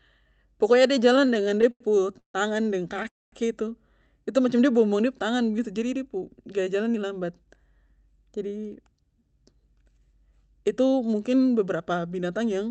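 Repeated stalls (stutter) break up the speech from 1.13 to 2.36 s. Packets kept reaching the receiver late, so its jitter buffer emptied 14 times in that span. Each time, the last bit of sound was stretched out to cover the wait, about 366 ms in all, roughly 30% of the stretch, with the longest hold at 146 ms. Nothing is lost, but the speech catches, drags and restarts in a choppy rhythm.

A call audio freeze follows at 3.08 to 3.34 s. The sound hangs for 238 ms, and for about 220 ms of that it drops to silence. The cause is likely packets held up on the network, leaving the buffer with nothing to play until they arrived. When they did, the speech resumed where it stopped. The playback is pushed back by that amount, so a pause has been inserted rather than anything cut.

A jitter buffer speed-up runs from 5.80 to 7.63 s. The buffer was holding more audio than it wanted, so the receiver trimmed tiny slices, one or a few pitch cycles each, over and over, shedding about a fifth of a second. 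The speech plays at about 110% speed with its pitch unchanged, and sounds briefly hurried. Throughout, the band tops out near 8 kHz, which fits a wideband Opus call stream.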